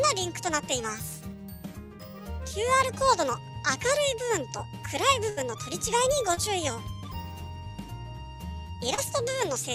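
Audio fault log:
5.29–5.39 s, burst of packet loss: About 80 ms of consecutive audio failed to arrive in time, so the receiver extended the last sound it had for roughly 74 ms and faded it down. The result is a brief held, dimming continuation in place of the real signal. When playback picks up again, the material from that stretch is simply gone, and the sound resumes a little further along.
6.35–6.39 s and 8.95–9.00 s, short concealed packet loss: At each point a few hundredths of a second never reached the decoder, about 20 ms the first time and 40 ms the second. The receiver filled the holes by carrying the preceding sound forward, for about 17 ms and 31 ms respectively, then crossfaded back into the real audio. Each repair is heard as a quick smear or wobble rather than a clean gap.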